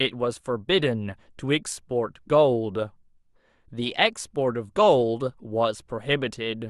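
No technical faults are audible.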